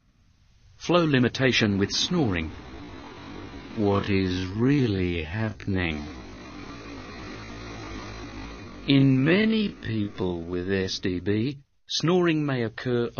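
A time-stretched section runs from 2.64 to 10.82 s, likely software slowing this stretch to half speed by repeating short pieces, so pitch holds while the pace drags.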